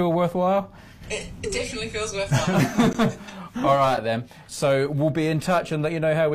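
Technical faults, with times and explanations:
2.93 s and 3.97 s, gap between stream segments: two short silences, about 16 ms and 6 ms, where timestamps on 1-second segments leave space that the player fills with silence. No audio is lost. Each shows as a hard-edged flat line in the waveform and a clean vertical blank on a spectrogram.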